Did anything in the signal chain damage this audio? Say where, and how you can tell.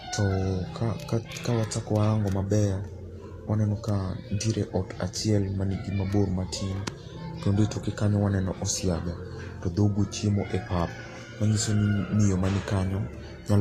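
Yes, at the codec stage, and it affects the whole speech clip. Nothing reaches above about 14.2 kHz, and the treble that remains is hissy and grainy. Consonant attacks are blurred and voiced tones sound roughened. The likely cause is low-rate Vorbis compression, roughly in the 35 kbps range. At that rate the encoder lowers its cut-off and quantises the residue above the spectral floor so coarsely that fine high-frequency detail turns into noise of similar energy.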